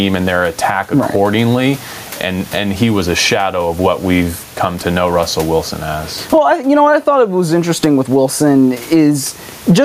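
Gain pumping runs through the whole speech recording, likely from input gain set far too high with a fast limiter clamping every loud syllable. The room noise sits about 40 dB below the speech, and the gain swings by around 20 dB. The waveform looks flattened.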